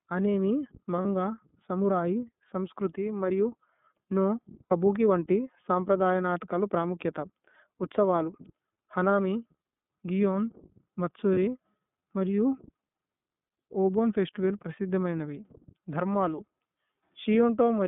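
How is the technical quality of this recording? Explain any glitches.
The recording is narrowband speech with audible codec coloring and three brief dropouts.

The iLBC codec shapes the whole clip. Sound is confined to roughly 150 Hz to 3.6 kHz. Each frame's excitation is coded independently, which fits the 30 ms, 13.33 kbps mode. The damage is plainly audible: speech sounds rough and slightly synthetic.

Lost iLBC frames occur at 1.02 to 1.05 s, 4.66 to 4.72 s, and 11.34 to 11.38 s. The gaps last 30, 60, and 30 ms. The decoder repeated the last pitch cycle with added noise. Each gap sounds like a short, buzzy held vowel. Normal speech returns almost immediately.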